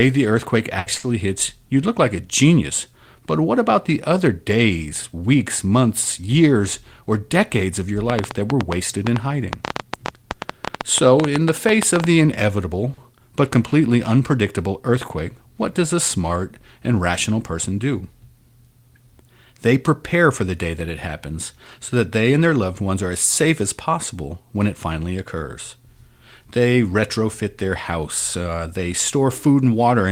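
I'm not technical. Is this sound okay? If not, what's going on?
No, there are several problems of the kind a voice call over an unsteady network produces.

At 0.79 to 0.89 s, between "the earthquake" and "hits you'd look like", there is a burst of packet loss. Some audio never arrived. The receiver stretched the last sound and let it fade for about 70 ms, so roughly 60 ms of speech is simply gone.

Short stalls from a late packet occur at 0.98, 12.94 and 15.08 s. Each time a piece of audio showed up late, so the player held the current sound a little longer, by about 50, 40 and 20 ms, then carried on. Nothing is lost, but the speech briefly hangs.

At 7.01 to 7.20 s, after "days weeks months years" and before "of your", a jitter buffer speed-up makes the speech run about 16% fast at the same pitch. Having built up too much waiting audio, the player trimmed roughly 40 ms in small slices, so that moment sounds rushed.

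From 8.10 to 12.05 s, starting after "of your", a train of clicks ticks over the speech and the pauses. There are about forty of them, irregularly spaced at roughly eight or nine per second. This is likely caused by electrical interference or a faulty connection or power supply.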